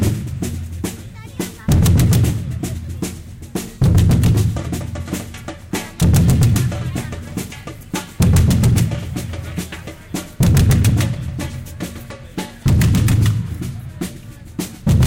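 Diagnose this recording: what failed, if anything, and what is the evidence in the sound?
Nothing stood out on listening to this recording of everyday sounds.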